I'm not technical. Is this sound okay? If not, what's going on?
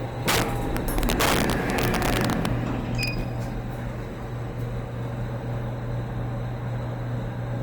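No. From 0.28 to 2.46 s, and again briefly at 3.03 to 3.08 s, loud moments crack harshly. That's integer overflow: peaks overshoot the limit and wrap to the opposite extreme.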